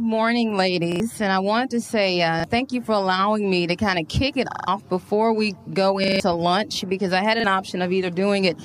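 The playback device repeatedly ran short of fresh audio and replayed its last buffer, a repeated buffer fault at 0.92 to 1.0 s, 2.4 to 2.44 s, 4.52 to 4.68 s, 6.04 to 6.2 s and 7.4 to 7.44 s. Each time a slice of sound plays again, once to four extra times, with a hard join at every repeat. The repeat length fits a 40 ms buffer. The result is a short stutter, and up to around a sixth of a second of audio goes missing in the longest ones.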